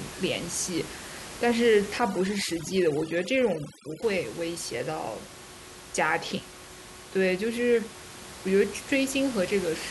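From 1.98 to 4.02 s, overdone noise removal gates individual frequency bands near the noise estimate, so the room noise (about 15 dB below the speech) drops and breaks up into twinkling specks; a spectrogram shows scattered isolated dots and hollowed, patchy harmonics.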